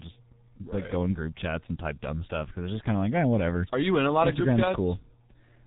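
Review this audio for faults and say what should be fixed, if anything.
The speech sounds muffled and hoarse with smeared consonants throughout, the signature of heavy G.723.1 codec coding: 30 ms frames, a slowly updated voice model, nothing above 3.9 kHz, consistent with about 6 kbit/s. Prevent it by routing the call through a wideband, higher-bitrate codec instead of G.723.1.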